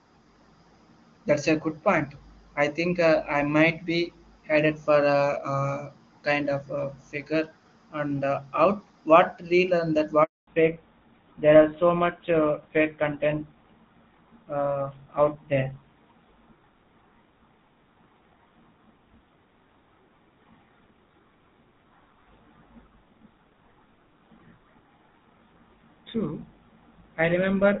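At 10.23 s there's a handover gap: the speech fades out within a few tens of milliseconds and then there's dead silence until 10.47 s, about 240 ms in all. That's the call being passed from one network to another, with no speech frames getting through while the link switched over, so whatever was said in that quarter-second is simply gone rather than garbled.

Right after, from 10.47 s to the end, you get a fallback to narrowband. Before the gap the speech has the open, airy top end of HD Voice, consistent with AMR wideband running at a high rate. Afterwards nothing above 4 kHz survives, and the speech turns duller and rougher. That sound points to the call dropping onto an older narrowband codec, something like GSM full rate, for the rest of the call.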